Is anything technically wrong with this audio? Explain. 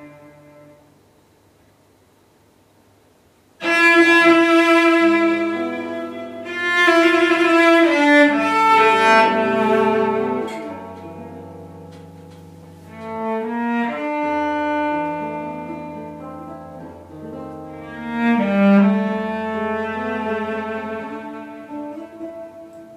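No, nothing technically wrong stands out here, and there's nothing that needs flagging.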